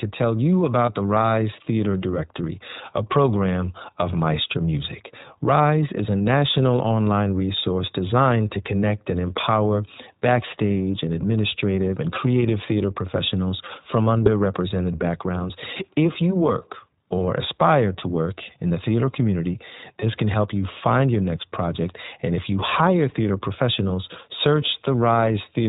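Throughout, the speech carries iLBC codec damage: everything above 4 kHz is gone, and a plainly audible rough, synthetic edge runs through the voice, consistent with the 15.2 kbps, 20 ms-frame mode. On a spectrogram, energy stops flat at 4 kHz.

Lost iLBC frames break in four times: at 0.86 to 0.90 s after "tell you", at 6.19 s after "is a", at 14.24 to 14.28 s after "creative theater professionals from", and at 20.00 to 20.04 s. Each gap lasts about 20 ms, which fits a single dropped frame. The decoder repeats the last pitch cycle mixed with noise, giving a brief buzzy, held-vowel blip before the voice is right again almost at once. In the waveform each appears as a short stretch of uniform repeated periods. On a spectrogram it shows as flat, smeared harmonics.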